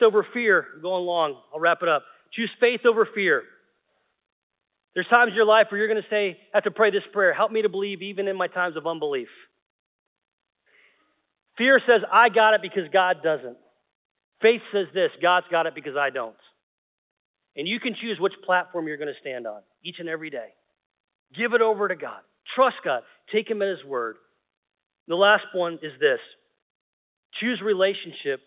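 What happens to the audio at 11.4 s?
Nothing goes wrong at 11.4 s: the speech continues intact through that moment, with only the steady narrow telephone band of its G.711 mu-law coding.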